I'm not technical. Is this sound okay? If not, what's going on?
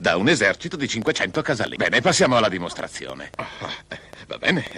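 No. Something, likely electrical interference or a faulty connection or power supply, is injecting short pulses, making a train of clicks from 1.02 s to 4.73 s: about ten similar pops at an uneven pace, close to three per second, ticking over the sound.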